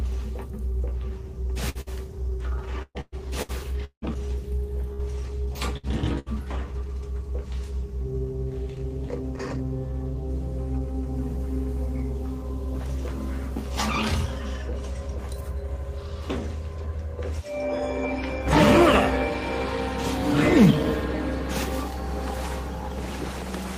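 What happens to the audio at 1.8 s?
Around 1.8 s the sound twice freezes into a smeared, fading continuation and then jumps ahead, from 1.69 to 1.78 s and again from 1.81 to 1.89 s. Each is a burst of packet loss: the receiver stretched the last audio for about 55 ms while fading it down, and when playback resumed, roughly 60 ms of material was gone.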